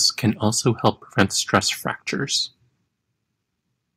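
At 1.54 to 1.57 s the input level was likely set too high, so the loudest moment of the speech drove the converter about 4 dB past its ceiling. This is microphone overload: the waveform peaks are sheared flat, affecting around 2 percent of the samples in that stretch. The flattened tops add a brief, harsh crackle, heard as a rough, splintered edge on that one loud burst before the sound returns clean.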